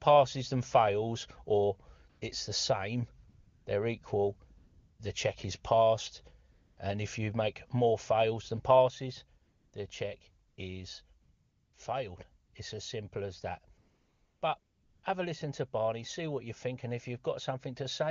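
A speech recording over a wideband phone link, in which the background repeatedly drops out and is replaced by a smooth, steady hiss that switches in and out abruptly. This is AMR comfort noise: the sender judged the talker silent, stopped sending speech frames, and the receiver synthesised stand-in noise from a rough level and spectral sketch. It happens ten times between 2.09 s and 15.03 s, with gaps from 80 to 640 ms. The first is at 2.09 s, after "than fails or" and before "it's the same they're". Another, from 4.57 to 4.99 s, sits between "the same they're equal" and "the check is passed". The longest runs from 13.77 to 14.41 s.

At 8.88 s the speech and background together drop by about 6 dB in an instant and stay there to the end. This sudden gain jump is likely a digital gain setting applied without a ramp.

The AMR-WB coding itself sounds clean, consistent with one of its higher rates.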